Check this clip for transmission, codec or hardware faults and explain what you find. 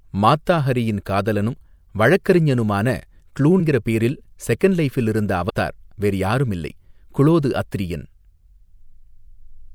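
Two skips from compressed frames being dropped. At 3.59 s the sound jumps forward by about five frames, roughly a tenth of a second. At 5.49 s it jumps again, by about three frames, some 70 ms. The codec packs audio into 24 ms frames. Whole frames were lost from the stream or rejected as damaged by the decoder, so playback leaps ahead.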